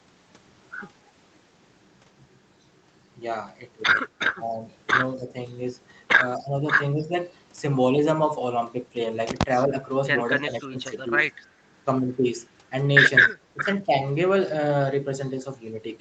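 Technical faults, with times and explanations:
6.38–6.56 s, 9.68–9.72 s, 10.69–10.91 s and 13.54–13.65 s, speech suppressed in double talk: the voice briefly dips by about 10, 5, 15 and 10 dB, each dip lasting only a fraction of a second. This is likely an echo canceller that heard both sides at once and turned everything down.
11.41–11.46 s, echo leak: a faint, brief scrap of the voice returns 248 ms after the original, very quiet, at roughly 35 dB below the speech. This is likely sound from a far-end loudspeaker that its echo canceller failed to remove fully. Reverb would smear continuously behind the voice, but this is a single copy delayed by about a quarter second.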